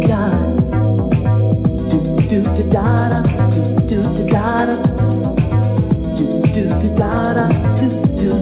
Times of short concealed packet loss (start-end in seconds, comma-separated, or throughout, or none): none